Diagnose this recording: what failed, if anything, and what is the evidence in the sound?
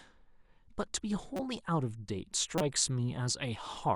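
The fault sits in the codec stage: corrupt frames were decoded and played. Two short bursts break through the speech, at 1.36 to 1.40 s and 2.58 to 2.61 s, each lasting about 30 ms and carrying misplaced energy. The first peaks around -25 dBFS and the second is a little louder, near -20 dBFS. Damaged bits gave the decoder wrong gains or codes, so it put energy at the wrong frequencies. The durations fit one damaged frame at the first point and about two at the second.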